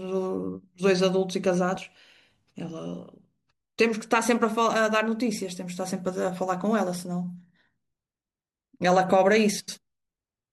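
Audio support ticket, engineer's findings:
Brief garbled flutter at 1.75–1.77 s and again at 9.59–9.78 s; no audio lost. Frames out of order: two adjacent runs, which fits about four frames each, decoded swapped, so each stretch plays with its halves exchanged.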